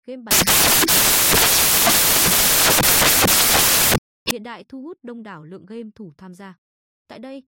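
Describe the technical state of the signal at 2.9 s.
At 2.9 s the speech is replaced by samples built from the wrong bytes (0.31–4.31 s): misassembled sample bytes push low-order bits to the top, giving loud, harsh broadband noise until "hiện đại thu hút".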